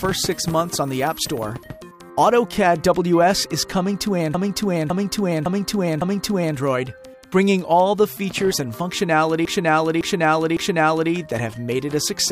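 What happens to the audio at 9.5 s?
A run of compressed frames was sent again, so the decoder repeats a 557 ms block (consistent with about six frames) three extra times between 9.45 and 11.12 s. The result is repeated frames heard as a looping stutter, lengthening the audio by 1.67 s.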